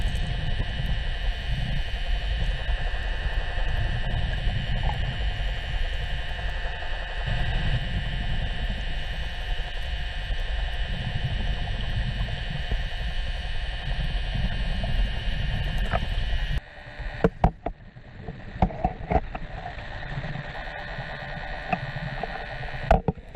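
A call bitrate drop runs from 17.22 to 20.6 s: the encoder's bit budget collapses, audio bandwidth narrows from 20 kHz to 8 kHz, and coarse coding leaves the sound rough and muffled for about 3.3 s, consistent with a fall from roughly 96 to 14 kbps.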